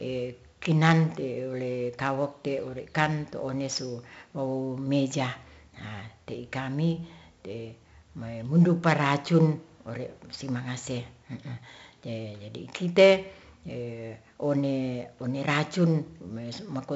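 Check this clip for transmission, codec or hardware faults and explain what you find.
One fault runs through the whole speech clip: 4-bit ADPCM compression. Across the full duration there is a gritty hiss riding on every loud syllable, rising and falling with the level, and sharp onsets sound roughened and distorted. Each sample is stored as a coarse 4-bit step from a prediction, so the quantisation error follows the signal, and the adaptive step lags on fast attacks. The damage is heavy. With nothing above about 7.7 kHz, the sound is dulled, which fits a 64 kbps stream at a 16 kHz sample rate.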